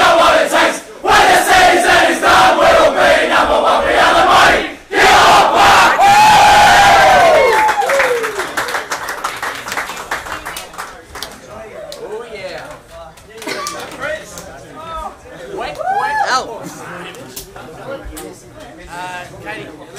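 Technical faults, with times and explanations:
No technical faults can be heard in this clip.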